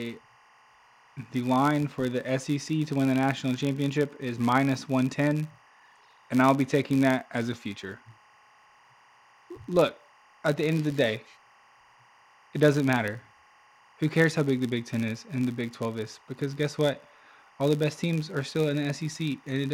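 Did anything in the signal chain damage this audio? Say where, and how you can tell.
Yes. A steady chirping warble runs under the speech for the whole clip, roughly 30 dB down, flipping between pitches near 1 and 2 kHz at a 23.976 frame-per-second cadence. This is timecode bleed: linear timecode leaking from an adjacent cable or track in the analogue wiring.

A buzz at 93.8 Hz also sits throughout, rising and falling with the speech level. This is a filter restarted on every block: each block starts from a cleared state and clicks. The rate fits a 512-sample buffer at the driver or buffer stage.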